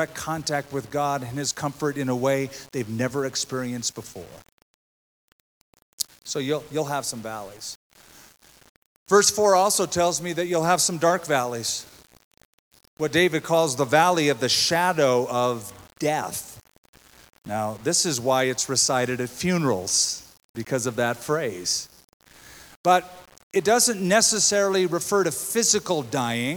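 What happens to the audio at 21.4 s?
At 21.4 s the sound is grainy, as it is through the whole clip. The likely cause is low bit depth without dither, fitting about 8 bits rounded to coarse steps. The error tracks the signal, so quiet passages turn gritty. The distortion sits roughly 30 dB below the signal.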